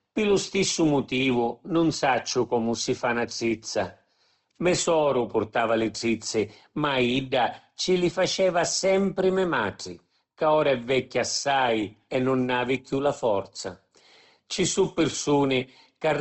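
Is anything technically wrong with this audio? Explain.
Yes, the speech has audible compression damage throughout.

Opus compression, likely at a low bitrate around 16 kbps: bits run short, so the encoder fills bands with folded or noise-like content, making the speech rough and grainy. A spectrogram shows nothing above 8.2 kHz and smeared, noisy harmonics instead of clean lines.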